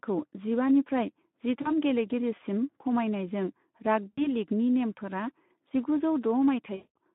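Speech carried over a narrow 150 Hz to 3.6 kHz line shows plainly audible Speex codec damage throughout: a hoarse, noisy CELP roughness that fits a rate around 11 kbps. Unlike generic MP3-style swirl, it comes from an underfed excitation, so it sounds raspy rather than watery. VoIP packet loss concealed by the speech codec appears at 1.61–1.72 s, 4.13–4.32 s (just before "लिगनि नेमफोरा जिगुजौ") and 6.75–6.96 s. The gaps, which fit about 40, 60 and 200 ms of lost 20 ms frames, are filled with a stretched buzz or coloured noise that fades rather than silence or clicks. This fading fill separates the concealment from plain dropouts.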